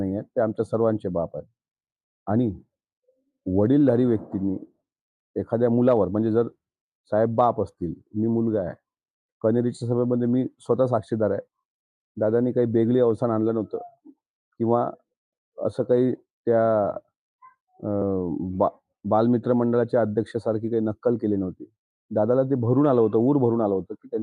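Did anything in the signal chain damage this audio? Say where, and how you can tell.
No, nothing in the signal chain damaged this audio.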